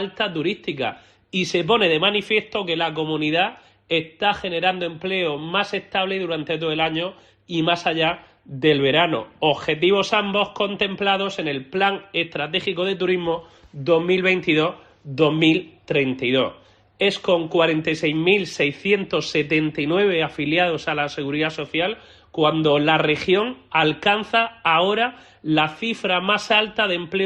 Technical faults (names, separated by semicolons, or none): none